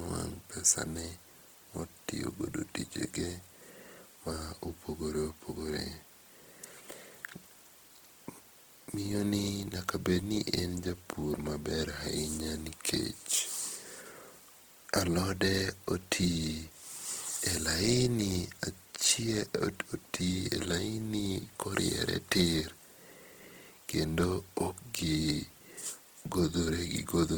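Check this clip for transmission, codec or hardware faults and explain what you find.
One codec fault is present, and it lasts the whole clip.

Throughout, the speech sounds rough and grainy, likely from Opus compression in CELT mode, which fits a rate near 16 kbps. Starved bands are refilled with folded or noise content, so a spectrogram shows speckled but unbroken energy up to 20.1 kHz.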